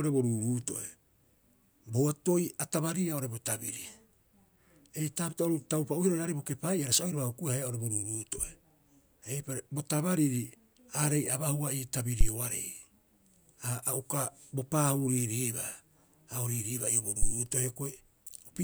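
At 12.21 to 12.26 s and again at 17.23 to 17.31 s the speech is hit by a phantom power thump, peaking near -11 and -15 dBFS. A supply switching on the live input sends a voltage step through the coupling capacitors, giving a deep, fast-decaying thud (13 and 20 ms) with none of the rubbing of handling noise or the breathy burst of a plosive.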